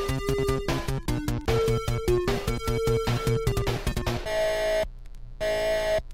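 From 4.85 s to the end, a mains buzz appears: 60 Hz harmonics from twice-per-cycle switching spikes, a steady raspy buzz roughly 30 dB below the sound.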